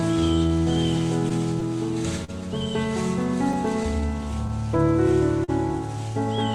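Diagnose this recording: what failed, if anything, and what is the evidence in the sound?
Clock drift between sender and receiver sits at the network/buffer stage and runs through the whole clip. The sending device's clock runs roughly 3 percent slow, so the jitter buffer keeps draining and the receiver has to compensate. You hear a faintly unsteady tempo rather than one clear event. On a waveform, event spacing wanders slightly, and on a spectrogram the onsets drift against a steady grid with no single break to point at.

Scattered short gaps, also a network-stage fault, show up in two stretches: about five from 0.01 to 2.30 s and about five more from 3.52 to 5.50 s. Each lost or late packet was patched by extending the preceding sound, filling roughly 70 ms per stretch, the longest hole around 40 ms. They come through as small ticks and smears. A spectrogram shows brief frozen or smeared columns where harmonics flatten, and the waveform shows short repeated cycles at each patch.

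Repeated timing corrections run from 0.20 to 5.08 s. They are the receiver's response to the slow sender. It repeats short pieces, stretching playback to about 99 percent speed and adding roughly 50 ms overall, always lengthening and never cutting, at uneven spacing. On the waveform, look for tiny duplicated segments with a splice at each edge. On the spectrogram, a few frames repeat and transients double faintly.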